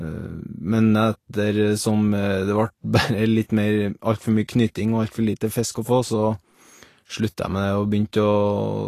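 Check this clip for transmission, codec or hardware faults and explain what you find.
Vorbis compression runs throughout the speech, likely from low-bitrate encoding. Nothing survives above about 14.2 kHz. Coarsely quantised treble turns to noise, sounding hissy and grainy, with blurred consonant attacks.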